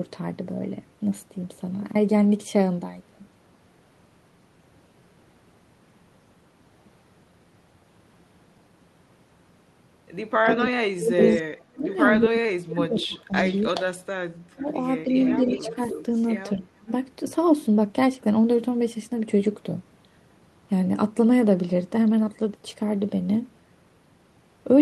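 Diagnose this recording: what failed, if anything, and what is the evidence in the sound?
Speech suppressed in double talk, 10.43–13.81 s, 14.56–15.79 s and 16.56–16.91 s: call-processing stage, likely the echo canceller ducking the talker by up to about 35 dB during overlapping talk.

Echo leak, 10.48–11.96 s, 12.99–13.82 s, 14.59–16.3 s and 16.88 s: a delayed copy trails by about 310 ms, from about 5 to 40 dB below the speech, likely as residual loudspeaker echo escapes cancellation.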